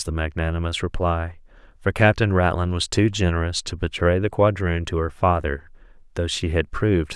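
No technical faults can be heard in this speech recording.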